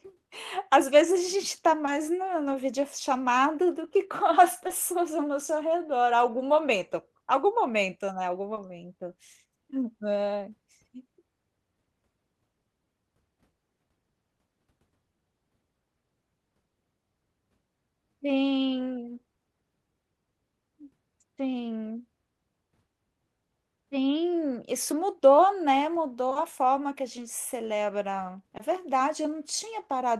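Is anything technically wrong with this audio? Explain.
Yes. Six times a small piece of the speech arrived too late to decode, and the receiver covered each gap with short concealed packet loss: it extended the preceding sound by about 20 ms, then crossfaded back into real audio. Each repair is a brief smear or wobble, at 1.85 s, 4.67 s, 8.55 s after "algum momento né algum", 26.29 s and 26.33 s back to back after "mudou né", and 28.57 s after "que a gente celebra".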